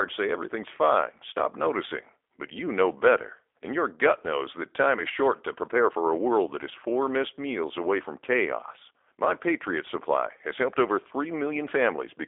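From start to finish the speech carries G.729 codec damage, and it is plainly audible. The sound is rebuilt from a vocal tract filter, a pitch predictor and a few pulses per frame rather than the original waveform, which fits G.729A at around 8 kbit/s. The result is a slightly rough, synthetic texture. The band is confined to roughly 300 Hz to 3.6 kHz, with nothing above 3.7 kHz, so sibilants sound dull and thin.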